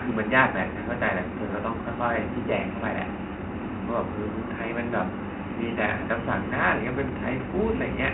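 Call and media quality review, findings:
Bluetooth CVSD headset codec, whole clip. Narrowband speech, nothing above 4 kHz; spectrogram shows a hard ceiling there. Plainly audible damage: scratchy sibilants, loud high-energy passages distorting where the adaptive one-bit step can't keep up, fine granular hiss beneath speech. Waveform shows stepped, jagged slopes on fast transients. Consistent with a 64 kbit/s CVSD headset link. Room noise sits about 52 dB below speech.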